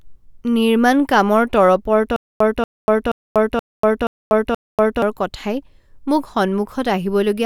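A speech recording breaks into a stutter with silent gaps between 2.16 and 5.02 s: a single 235 ms fragment of sound plays, drops into about 241 ms of dead digital silence, then returns unchanged, six times at a steady 477 ms rhythm. Whatever should have been heard during that stretch is gone. The likely cause is a stalled player or stream that replayed its last buffered fragment on each retry and then ran dry.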